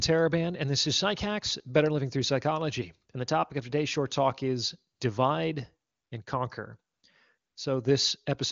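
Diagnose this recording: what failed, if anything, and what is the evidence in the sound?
In call processing, the phone's voice activity detection judged the talker silent and stopped sending speech frames, so the receiver filled the gaps with AMR comfort noise. Smooth synthetic hiss switches in at 3.11 s, 4.95–4.99 s, 5.89–6.11 s (between "short talk is divide" and "and conquer"), 6.93–7.03 s and 7.37–7.55 s, replacing the real background. The clean wideband speech around these gaps fits AMR-WB at 23.85 kbit/s.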